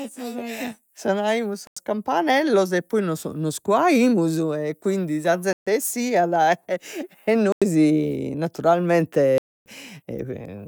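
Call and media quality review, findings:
Hard dropouts in the speech, each a dead hole. Block of digital silence at 1.67–1.77 s and 7.52–7.62 s, both 93 ms, consistent with a single missed 4096-sample buffer. Same symptom at 5.53–5.67 s (137 ms) and 9.38–9.66 s (279 ms). Probable component: playback or processing thread missing its buffer deadline, output zero-filled. Abrupt cut to silence with no fade.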